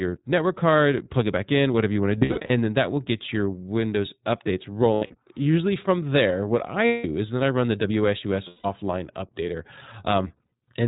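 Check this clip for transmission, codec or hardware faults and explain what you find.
Two faults are present: coding damage from the iLBC codec across the whole clip, and lost iLBC frames at five points.

Throughout the speech there is a narrow, slightly rough and synthetic quality, with nothing above 4 kHz and plainly audible coding damage. This comes from the iLBC codec, a narrowband VoIP coder that models the excitation of each 20 ms frame independently of the one before. The thin, rough texture fits its 15.2 kbps mode.

At 2.18 to 2.51 s, between "whatever you want to" and "then that will get", the speech briefly turns into a held, slightly buzzy or breathy vowel-like sound. The same thing happens at 4.94 to 5.27 s, at 6.86 to 7.06 s (between "from there what" and "is then I run"), at 8.48 to 8.66 s, and at 10.22 to 10.70 s. These are lost iLBC frames. When packets are missing, the decoder repeats the last pitch cycle mixed with noise, which produces the sustained tone. 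About 160 to 220 ms of audio is lost at each point. In the first, second and last events the losses are scattered over 320 to 460 ms, with the longest continuous stretch around 70 ms. Because each iLBC frame decodes on its own, clear speech returns almost immediately after each gap.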